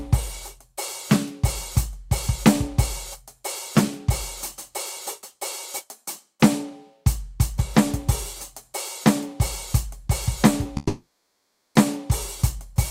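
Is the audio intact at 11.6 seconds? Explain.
No. At 11.6 seconds the music sits inside a long network dropout from 10.77 to 11.77 s, likely from the stream stalling. The receiver stretches the last sound into a fading buzz, then about 0.71 s of silence: a blank gap on a spectrogram and a flat waveform.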